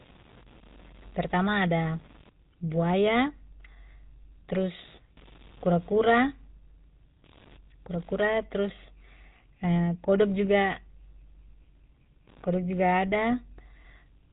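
The speech carries a faint computer activity noise throughout. It is a buzz pulsing at around 70 Hz, roughly 35 dB below the speech, driven by ground currents from the computer's load changes. The whole clip also shows plainly audible GSM full-rate codec damage. Nothing above 4 kHz survives, and the voice sounds buzzy and gravelly, which fits the 13 kbps full-rate coder. GSM bit errors break through twice, from 3.16 to 3.18 s and from 9.94 to 9.97 s, just before "kodok juga". Each burst is a brief squawk or gargle. Corrupted filter, pitch or gain values distorted one or two decoded frames.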